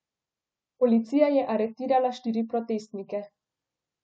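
Nothing in this recording stands out as a technical fault; the speech comes across without any audible glitch worth pointing to.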